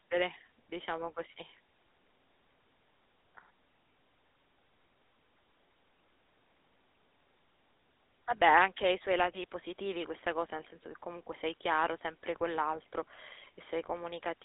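Speech, passed through a GSM full-rate codec for its whole length. The voice sounds buzzy and gravelly, with nothing above 3.8 kHz. Its narrow 250 Hz to 3.7 kHz band fits a 13 kbps phone channel.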